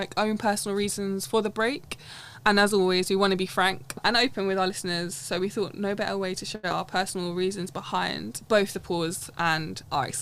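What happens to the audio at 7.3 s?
A jitter buffer slow-down from 6.99 to 7.47 s stretches the audio by 44 ms, so it plays at 92% speed, drawn out but unchanged in pitch.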